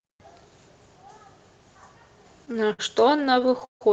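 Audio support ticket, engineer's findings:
Repeated stalls (stutter), 2.45 to 3.83 s: about 20 short hangs with sound stretched to fill them, longest around 158 ms, roughly a quarter of that stretch concealed. Jitter buffer kept running dry on late packets. Nothing dropped, just drags. Band tops out near 8 kHz, fits a wideband call codec.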